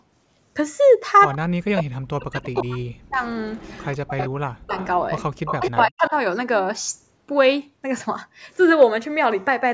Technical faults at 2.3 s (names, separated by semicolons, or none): speech suppressed in double talk